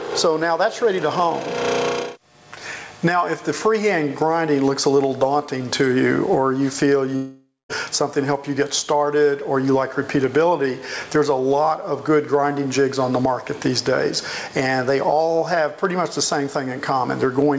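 Throughout the clip the level is pumped up and down, a swing of around 20 dB. This is gain pumping, likely from input gain set far too high with a fast limiter or compressor clamping down on every peak. Unlike a noise gate, which shuts the floor off, gain pumping lifts the level in the gaps rather than cutting it, and loud and quiet parts sit squashed close together. From 7.16 s to 7.71 s there is a long network dropout, likely from audio that never arrived. The last sound is stretched into a fading buzz for about half a second, the last roughly 0.23 s of it near-silence, before the audio resumes with that stretch missing. A brief concealment glitch would pass in tens of milliseconds, but this gap lasts over half a second. Nothing sounds above 8 kHz, which fits a G.722 call codec at 64 kbps.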